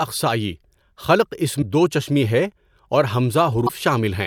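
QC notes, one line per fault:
1.58–1.63 s, damaged data in a compressed stream: a short glitch of about 50 ms breaks into the speech where corrupted frames made the decoder lose sync.
3.65–3.70 s, damaged data in a compressed stream: a similar 55 ms blip as the decoder misreads bad bytes and searches ahead for the next valid frame header.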